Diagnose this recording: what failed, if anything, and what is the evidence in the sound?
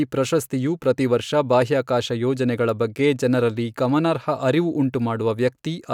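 Nothing failed here: the speech runs without a single dropout, glitch or distortion to point to at any stage of the chain.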